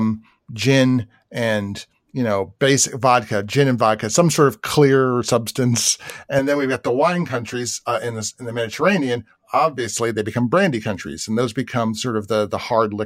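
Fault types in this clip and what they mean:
Channel delay (comb filtering): one channel trails the other by about 10 ms, and the mono sum cancels at evenly spaced frequencies from around 50 Hz, so 6.39 to 9.98 s sounds hollow and phasey; a spectrogram shows fixed, regularly spaced dark horizontal stripes.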